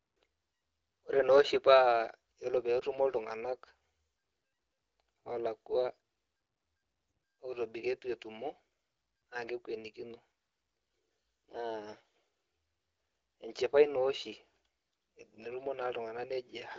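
Lost AMR speech frame at 2.79 to 2.84 s, between "ore peyie" and "etumo iltunganak": the decoder patched over a corrupted frame, leaving a brief dip or warble, consistent with one 20 ms frame lost.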